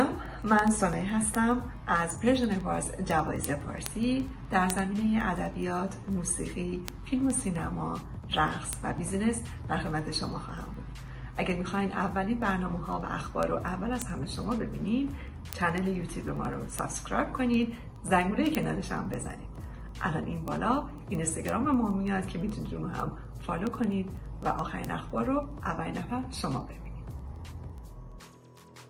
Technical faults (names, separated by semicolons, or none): word clock ticks